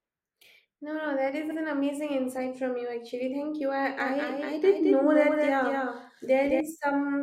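Repeated frames at 1.50 s: a block of about 70 ms, which fits three compressed frames, was sent twice, so the decoder plays that slice once more. It sounds like a brief stutter, and stretches the clip by 70 ms.

A doubled audio track runs from 4.00 s to 6.60 s: a second full-band copy trails roughly a fifth of a second behind, about 5 dB quieter, dry and without decay, cutting in and out abruptly. It was likely picked up again through a slower capture path.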